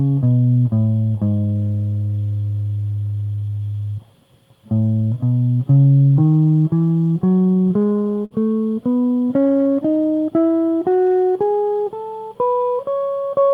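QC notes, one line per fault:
7.39 to 8.33 s, repeated stalls (stutter): the music catches and drags in a burst of eleven brief hitches, each smearing the preceding sound forward, the longest about 52 ms, together about 148 ms of held-over sound covering some 16% of that stretch. Packets were reaching the receiver late or too slowly, so its jitter buffer kept running dry and it extended the last sound to bridge each wait. Nothing is lost; playback simply slips and stumbles.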